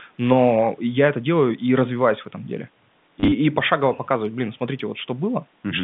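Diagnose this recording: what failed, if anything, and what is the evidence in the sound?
The network stage let this one down. From 3.2 to 3.32 s there's a short robotic stutter: about 90 ms of packets went missing across those 120 ms, in runs of up to 30 ms. The receiver replayed the last packet to fill each gap, and the 9 lost packets point to roughly 10 ms packets riding the G.711 telephone link.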